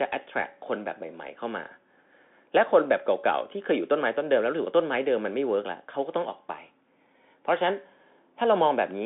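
Bluetooth CVSD headset codec damage runs throughout the speech. The sound is squeezed into a telephone-like band of roughly 250 Hz to 3.5 kHz, with nothing above 3.7 kHz, which fits a 64 kbps CVSD headset link. CVSD codes each sample as a single up-or-down bit with an adapting step size. Fast, loud high-frequency detail outruns that step and smears, so s sounds come out scratchy, with a granular hiss under the speech.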